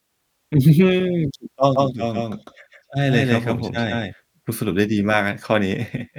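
From 1.76 to 4.14 s the speech sounds doubled: a second, equally loud copy trails around 150 ms behind, dry and full-band, switching on and off abruptly. This is a doubled audio track, likely from the signal being captured again through a slower path.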